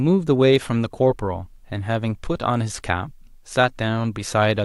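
No technical faults can be heard at any point in the speech.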